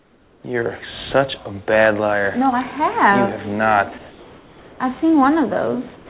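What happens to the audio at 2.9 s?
Nothing goes wrong at 2.9 s; the audio runs through that moment intact, with only the normal narrowband sound of the call path, which carries nothing above 4 kHz.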